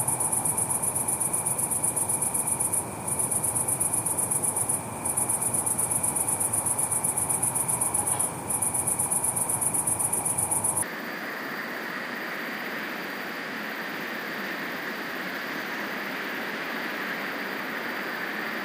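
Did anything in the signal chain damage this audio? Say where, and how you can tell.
Yes. From 10.83 s to the end, the sound is read two samples at a time (double speed), a sample-format conversion fault: pairs are taken as single frames, so it plays twice as fast and 12 semitones higher. A spectrogram shows everything jumping up an octave and events squeezed in time.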